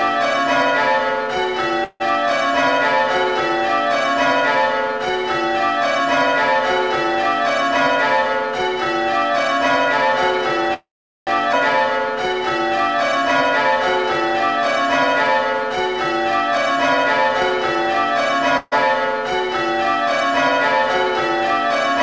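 At 1.84 to 2.02 s and again at 10.74 to 11.29 s there is a call audio freeze. The last sound is stretched into a fading buzz or hiss for 0.16 s and then 0.53 s, the second trailing into about 0.41 s of silence. The likely cause is delayed packets draining the jitter buffer. Nothing is lost, but the audio resumes late.

At 11.53 s a skip ahead removes roughly 0.4 s. Playback jumps forward with an almost seamless splice, pulling the timing back after the preceding delay.

At 18.57 to 18.74 s a burst of packet loss leaves a 0.14 s hole. It is bridged by the previous sound held as a decaying buzz or hiss before the audio picks up further on. Throughout, the band stops at 8 kHz, which fits a wideband codec such as G.722.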